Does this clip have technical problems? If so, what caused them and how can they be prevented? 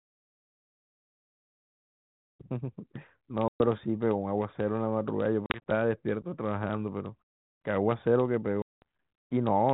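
Yes. Packet loss on an ADPCM call breaks the speech with abrupt silent holes at 3.48 to 3.61 s, 5.46 to 5.72 s (several short gaps, runs up to 40 ms), and 8.62 to 8.82 s. Each hole is followed by a brief, slightly distorted onset. The G.726 decoder's adaptive predictor and step size lost track of the sender during the dropouts and need tens of milliseconds to resynchronise. Prevention: carry the call over a link with less loss, or add jitter buffering and loss concealment that resets the ADPCM state cleanly.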